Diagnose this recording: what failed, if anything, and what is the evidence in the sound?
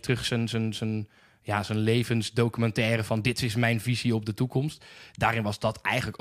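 Nothing in the speech signal points to a failure at any stage between capture and playback, so there is no fault here to diagnose.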